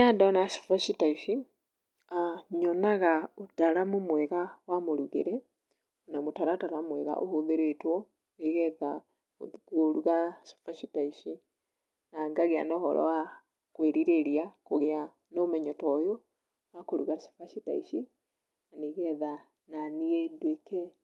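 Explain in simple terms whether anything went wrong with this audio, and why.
Nothing went wrong with this speech; it passed through an ordinary internet call path, whose codec trims the top of the sound at about 12 kHz, as such calls normally do.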